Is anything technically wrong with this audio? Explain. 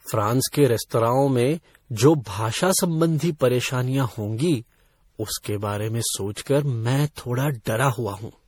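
Yes. Throughout the speech, generation loss: it was likely re-encoded about seven times with MP3 at a rate fitting 64 kbit/s, so the artefacts stack into a swirly, hollow, smeared sound with blurred attacks.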